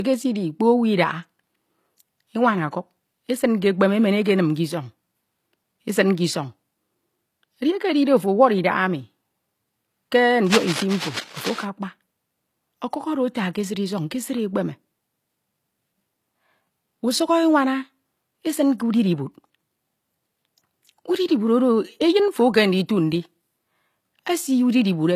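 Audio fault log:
Throughout: low-bitrate audio saved at a high bitrate. Nothing above 14.9 kHz, with the first encode's artefacts still present; likely a 24 kbit/s HE-AAC-style encode later re-saved as 192 kbit/s MP3.
10.46–11.66 s: cable scratch noise. Dense, uneven scratchy bursts sit roughly 10 dB under the speech, likely a worn cable or connector being moved mid-take.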